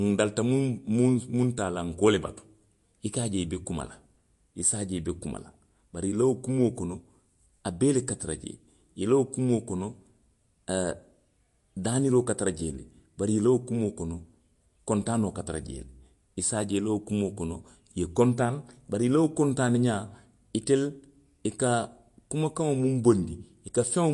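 Speech that sounds watery and swirly from start to finish, with a metallic chirping around s sounds and consonant attacks that smear rather than snap. Nothing reaches above about 11.3 kHz, so the top end is dull and flat. This is most likely MP3 compression: short of bits, the encoder cuts the treble at a fixed frequency and drops weak frequency lines that flicker on and off between frames. The plainly audible damage fits a low bitrate of around 48 kbps.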